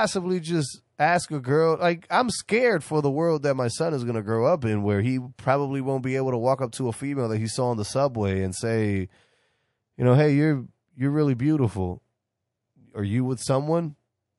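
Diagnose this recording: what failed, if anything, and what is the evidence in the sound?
The codec stage shows MP3 compression damage throughout the speech: watery, swirling artefacts chirp on sibilants. On a spectrogram, weak lines flicker frame to frame. The plainly audible damage points to a low bitrate, around 48 kbps, likely MP3.

Pre-echo, also from the codec, appears between 5.36 and 5.39 s, after "up in where he" and before "probably won't be able". A hiss about 10 dB up smears 25 ms ahead of an attack, visible as a noise smudge preceding the waveform onset. This fits long transform blocks spreading noise backwards, with no switch to short blocks.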